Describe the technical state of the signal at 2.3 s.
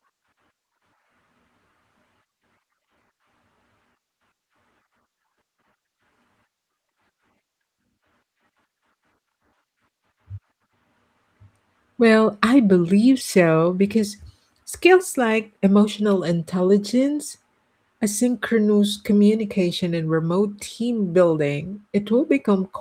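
At 2.3 s the signal is intact, with no audible fault at that moment.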